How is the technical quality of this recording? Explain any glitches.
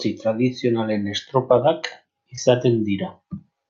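The speech has one glitch, a short concealed packet loss. From 2.35 to 2.39 s, about 20 ms of audio reached the decoder too late. The receiver covered the gap by extending the previous sound, then merged back into the real signal. It is heard as a brief smear. The high end stops near 8 kHz, which fits the bandwidth limit of a call codec.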